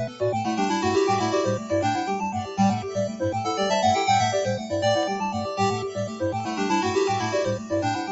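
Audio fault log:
Throughout, noise suppressor applied to music or sounds: a speech-tuned suppressor keeps treating sustained tones and decaying tails as noise, pulling them down by around 5 dB while attacks slip through. The level pumps and held material thins out, instead of ringing on naturally.
1.81 s, 5.03 s and 6.40 s, dropped samples: each is a single sharp click, a thin vertical line across the spectrum. The likely cause is a handful of samples going missing, so the waveform jumps straight to a later value, which is far too brief to lose any actual sound.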